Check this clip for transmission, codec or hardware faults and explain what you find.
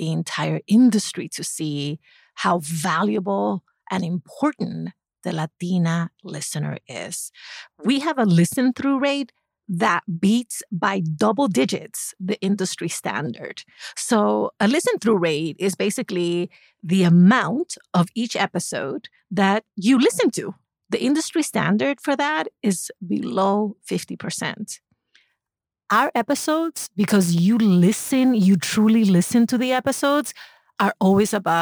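One fault is present: sample clock jitter, from 25.3 s to the end of the clip at 31.6 s. The converter's sampling clock wanders by several microseconds, so each sample is taken a little early or late. On steep parts of the waveform that timing slip becomes an amplitude error, here roughly 25 dB below the speech. It is heard as a grainy hiss riding on the speech, strongest on loud and sibilant sounds and gone in the pauses.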